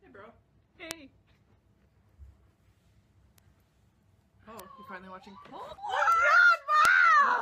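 Bit error spikes at 0.91, 3.38, 4.60, 6.12 and 6.85 s: single flipped bits make the value jump by a power of two and return, each heard as one sharp, broadband tick.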